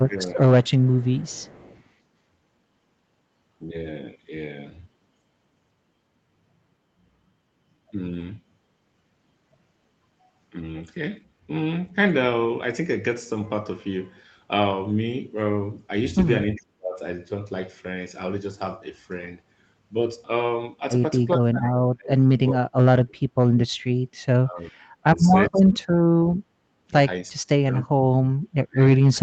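From 0.02 to 0.39 s the speech dips by roughly 15 dB, likely speech suppressed in double talk: the echo canceller, with both sides active, turned down the near talker along with the echo.

From 0.64 to 1.83 s a faint copy of the voice trails by about 400 ms at roughly 30 dB below the speech, likely an echo leak where loudspeaker pickup escaped cancellation and was sent back.

The same suppression returns more deeply at 16.55 to 17.0 s, 21.38 to 23.92 s, 24.41 to 26.93 s and from 27.42 s to the end. There the speech drops by roughly 35 to 40 dB, nearly cutting out in stretches of up to about two seconds.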